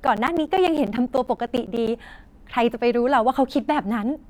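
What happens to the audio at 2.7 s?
Nothing goes wrong at 2.7 s: the speech carries on intact through that moment, with no dropout, glitch or distortion to be heard.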